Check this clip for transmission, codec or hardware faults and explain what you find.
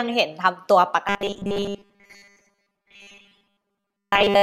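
One fault is present. From 1.07 s to the end, robotic sound from repeated short buffers: a rigid 200 Hz buzz, likely from repeating 5 ms buffers, replaces most of the speech.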